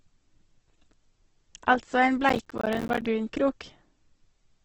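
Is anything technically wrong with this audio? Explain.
Yes, there are two faults in this speech clip.

Throughout, the audio sounds grainy and rough, with nothing above 8.2 kHz. That points to heavy Opus compression, likely at a low bitrate near 12 kbps, filling starved bands with noise. On a spectrogram, a flat ceiling at 8.2 kHz and smeared, speckled harmonics.

From 2.29 to 3.05 s there is processor overload crackle. The processor repeatedly misses its deadlines on buffers of around 10 ms, about 30 of them, leaving each slot silent. It is heard as gritty tearing, and the waveform shows rapid hard-edged dropouts, with vertical clicks on a spectrogram.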